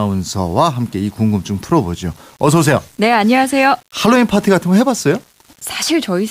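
Throughout the clip, quiet speech turns gritty, with grain roughly 35 dB under the signal that rises and falls with it. The likely cause is low bit depth without dither, rounding consistent with 7 bits. The waveform shows stepped levels, and the spectrogram shows broadband noise tracking each syllable.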